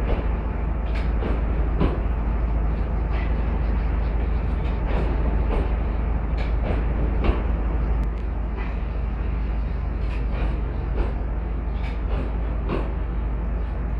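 From 8.04 s to the end, the sound turns rough and slightly doubled: channel delay (comb filtering), one channel lagging around 20 ms, cutting notches from around 20 Hz upward.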